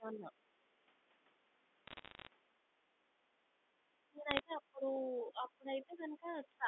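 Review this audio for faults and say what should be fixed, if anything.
Speech suppressed in double talk at 0.0–0.32 s, 4.06–6.28 s and 6.45–6.68 s: the talker dips by about 10, 20 and 25 dB, likely because the echo canceller muted both sides during overlapping talk. Tuning the canceller's double-talk detector to keep near-end speech while the far end is active would prevent this.

Bit errors on a digital phone line at 1.87–2.27 s and 4.31–4.39 s: flipped bits in single G.711 samples put sharp ticks and crackle over the sound, at a rate of around half a percent. Error-checked or cleaner digital transport on that line would prevent them.

Background gated by the echo canceller at 3.14–3.29 s and 3.64–3.75 s: the room sound drops by about 10 dB in short bursts as the canceller clamps the microphone. Gentler suppression with comfort noise filling the gaps would prevent it.

Other side's voice leaking through at 6.26–6.36 s: a faint second voice appears about 35 dB below the talker, likely loudspeaker echo the canceller left behind. 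Better echo-path adaptation or lower loudspeaker volume on the talker's device would prevent it.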